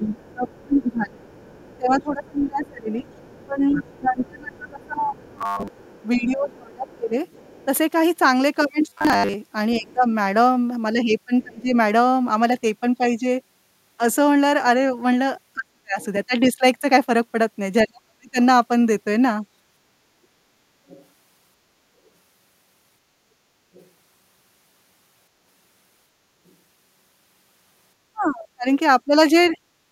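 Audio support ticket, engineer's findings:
Speech suppressed in double talk, 0.0–11.7 s, 15.55–18.37 s, 28.13 s to end. Talker dips repeatedly, deepest around 25, 40 and 35 dB. Likely echo canceller misjudging both-sides-talking as echo and attenuating near-end speech along with it.

Other side's voice leaking through, 0.29–7.65 s, 16.01–16.06 s, 20.88–26.52 s. Faint far-end voice under the talker, roughly 30 dB down, nearer 25 dB at 16.01 s. Likely residual loudspeaker echo the canceller failed to fully subtract from the mic path.

Robotic sound from repeated short buffers, 5.39–5.69 s and 8.87–9.34 s. Rigid metallic 100 Hz buzz riding the speech, most of each span repeated material. Likely starved playout looping a 10 ms buffer, the loop rate fixing the buzz pitch.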